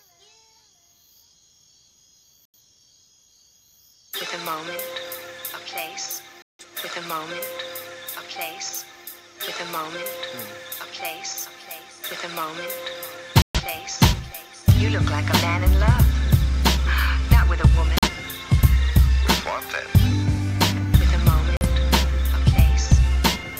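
At 2.45 to 2.58 s, 6.42 to 6.65 s, 13.42 to 13.61 s, 17.98 to 18.08 s and 21.57 to 21.67 s the sound is muted by a digital broadcast dropout. The receiver lost the signal and went silent until valid frames returned. The missing spans, roughly 43 to 170 ms, fit whole frames of about 43 ms. The sound resumes further along rather than picking up where it stopped, which sets this apart from a buffer stall.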